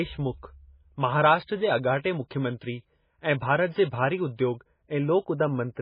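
Channels drifting apart runs throughout the speech. Two clocks about 40 ppm apart let the inter-channel delay creep toward a fraction of a millisecond, so the mono sum flanges slowly.

Heavy watery, swirly smearing with nothing above 5 kHz also runs throughout. The likely cause is MP3 compression at a bitrate that fits about 16 kbps, zeroing weak frequency lines.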